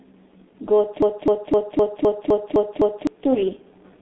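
Throughout, the speech carries heavy G.723.1 codec damage. Content above 3.8 kHz is missing, and the band runs roughly from 200 Hz to 3.7 kHz. It sounds muffled and hoarse, with smeared consonants, which fits a very low-bitrate telephony coder. A spectrogram shows a hard ceiling near 3.8 kHz.

From 1.02 to 3.07 s, a system hang loop takes over. The same 256 ms chunk, consistent with a 4096-sample ring buffer, repeats eight times at about 3.9 Hz, a mechanical stutter replacing roughly two seconds of audio. The waveform shows identical repeating blocks.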